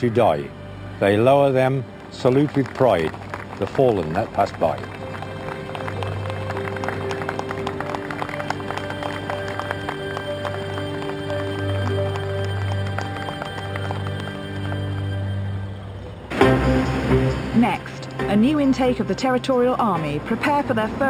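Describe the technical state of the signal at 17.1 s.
At 17.1 s the signal carries imaging from linear upsampling, present across the whole clip. Raising 12 kHz audio to 48 kHz by straight-line interpolation leaves the top dulled and mirrored copies, the first between 6 and 12 kHz, roughly 30 dB down, giving a faint metallic shimmer. A spectrogram shows these reflected bands above 6 kHz.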